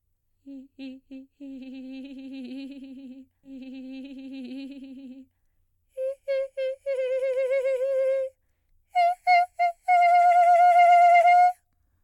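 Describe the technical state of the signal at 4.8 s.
At 4.8 s the music sits inside a stream segment repeated between 3.43 and 5.43 s: the player fetched or queued the same 2-second segment twice, so that stretch replays after a brief blip at 3.43 s. On a spectrogram, the block from 3.43 to 5.43 s copies the preceding pattern, with a thin vertical seam at the splice.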